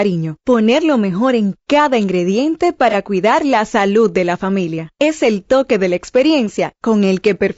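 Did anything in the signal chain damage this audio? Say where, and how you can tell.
Yes. Low-delay AAC compression runs through the whole clip: the speech sounds rough and grainy, with noise between the pitch harmonics and a dull top band. The likely cause is the codec stage, AAC-ELD's short frames starved of bits, which fits a low bitrate around 32 kbps.

AAC frame loss with concealment occurs from 2.90 to 2.95 s, between "mejor en cada ingrediente" and "cuidar la salud de". A brief smeared, noisy patch replaces about 30 ms of audio, which fits a single lost network packet that the decoder rebuilt from the previous spectrum.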